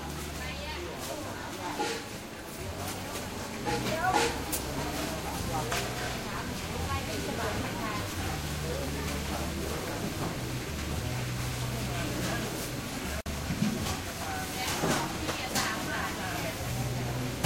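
At 13.21 s the sound drops out for about 53 ms, until 13.26 s. This is a gap at a join of encoded pieces. Separately encoded segments were joined untrimmed, leaving encoder delay and end padding. Edges are smeared, and the sound resumes where it stopped.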